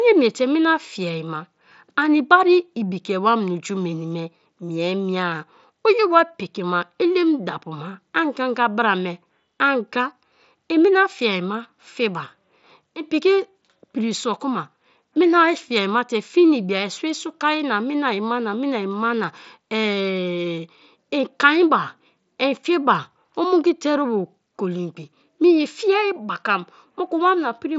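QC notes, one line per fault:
No faults found.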